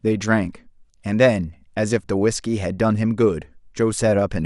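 From start to finish the speech carries plainly audible MP2 compression, likely from an MPEG Layer II encoder working at a low rate, around 80 kbps. Starved of bits, it shuts off upper sub-bands and quantises the rest coarsely. The result is dull and gurgling. A spectrogram shows ragged high-frequency blocks flickering on and off.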